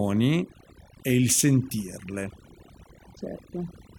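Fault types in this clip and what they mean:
overdone noise removal: a noise reduction stage pushed too hard across the whole speech clip, cutting individual frequency bands whenever they sit near its noise estimate. Quiet parts of the voice are removed along with the noise, leaving a lowered background speckled with twinkling artefacts.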